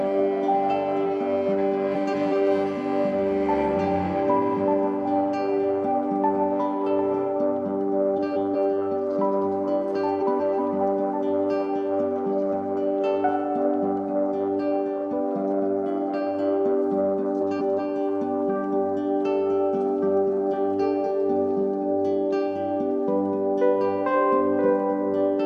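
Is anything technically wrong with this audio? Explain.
Yes. Frames out of order occur four times, at 1.94 to 2.33 s, 8.16 to 8.56 s, 10.20 to 10.60 s and 17.40 to 17.80 s. Each time, two adjacent runs of about 186 ms, consistent with four frames each, were decoded in swapped order, so the second half plays before the first. The result is a brief garbled flutter. No time is lost overall.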